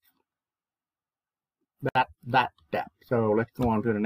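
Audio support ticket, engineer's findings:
Gap at a join of encoded pieces, 1.89 to 1.95 s: about 63 ms dropout in continuous sound, resuming where it stopped. Probable component: segment concatenation after encoding. Each piece's encoder start delay and end padding left untrimmed. Waveform: flat line, smeared edges. Spectrogram: full-band vertical blank stripe. Repeat interval fits 4 s pieces.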